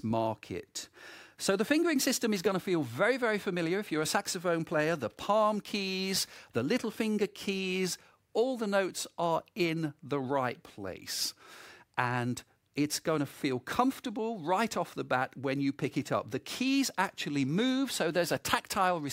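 No technical faults can be heard anywhere in the audio. At no point does the sound reveal a moment where the recording or playback chain went wrong.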